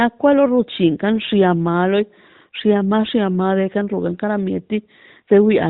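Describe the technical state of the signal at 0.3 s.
At 0.3 s the signal is intact with no fault present, the speech passing through the AMR narrowband mobile codec as an ordinary phone call would.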